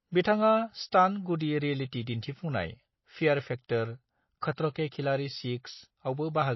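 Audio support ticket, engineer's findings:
MP3 compression, throughout. Treble absent above 5.8 kHz, watery swirl, smeared consonant attacks. Likely a low-bitrate MP3 encode, plausibly around 24 kbps. Encoder short of bits cuts the top band and drops weak spectral lines frame to frame.

Pre-echo at 0.91 s, 4.41 s, and 4.72 to 4.75 s. Brief hiss ahead of sharp onsets, softened attacks. Transform codec spreads quantisation noise across the block, so noise sized for the loud attack fills the quiet instant before it.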